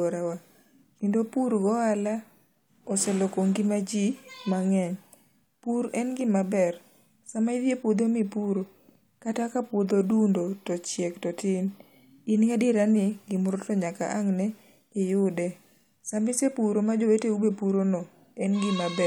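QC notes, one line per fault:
Nothing stood out on listening to this speech recording.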